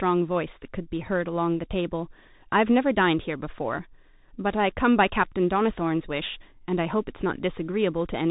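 Speech run through a Bluetooth CVSD headset codec for the whole clip: nothing passes above 3.8 kHz, and plainly audible one-bit slope-tracking grit fits a 64 kbps link.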